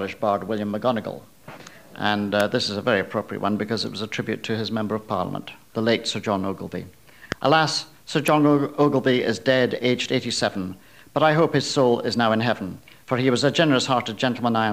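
At 2.40 s a sharp snap sits on top of the sound, peaking high, near -10 dBFS, and at 8.28 s a second, louder one reaches close to -5 dBFS. Both are electrical switching spikes: brief, hard-edged transients lasting at most a few milliseconds, unrelated to the surrounding audio. They likely come from a nearby switch, motor or static discharge arcing and coupling a short voltage burst into the audio line.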